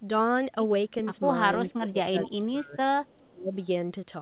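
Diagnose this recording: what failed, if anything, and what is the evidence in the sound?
Speech suppressed in double talk, 1.7 to 2.75 s and again 3.3 to 3.52 s. This happens at the call-processing stage. The speech dips by as much as about 25 dB, in broken pieces adding up to well over half a second in the first stretch and a fifth of a second in the second. This is likely the echo canceller failing to tell the near talker from loudspeaker echo while both sides were active, and attenuating everything.

Echo leak, 2.24 to 2.3 s and 3.06 to 3.29 s. This is also a call-processing fault. A copy of the speech returns 418 ms late, first as a brief scrap about 20 dB below the speech, then as a longer, fainter trace about 35 dB down. The likely cause is the far end's echo canceller, which left part of what its microphone picked up from its loudspeaker and sent it back, band-limited like the rest of the call to about 4 kHz, as G.711 telephony would be.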